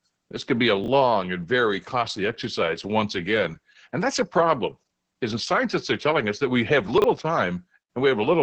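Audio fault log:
throughout Opus voice compression: The sound is band-limited, with nothing above about 8.5 kHz, and has the muffled, hoarse, slightly robotic quality of the SILK linear-prediction coder running near the bottom of its range. The heavy damage fits roughly 10 kbps. The coarse excitation coding causes the rasp. It differs from simple low-pass filtering because the texture itself is degraded throughout, not just the top end. It also differs from packet loss because there are no gaps.
0.84 s and 6.98–7.04 s chunks out of order: There are two brief jumbled moments. The first falls between "could be a" and "and very costly exercise", where a 20 ms chunk plays one chunk late. The second comes just after "us that we have", where a 20 ms chunk plays two chunks late. Each misplaced piece creates hard joins. Nothing is missing, which separates this from a dropout. The garble is local and brief, which separates it from the constant codec roughness.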